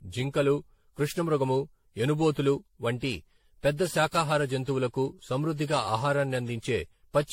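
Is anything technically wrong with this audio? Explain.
Yes. Throughout the speech there is generation loss: the sound is swirly, smeared and hollow, with blurred attacks and nothing above 16.5 kHz. The likely cause is repeated lossy re-encoding, consistent with AAC-LC at about 64 kbit/s applied around seven times, each pass requantising on a shifted frame grid so that noise and spectral holes accumulate. What sets it apart from a single low-bitrate encode is that the smearing and hollowness go beyond what that bandwidth alone would produce.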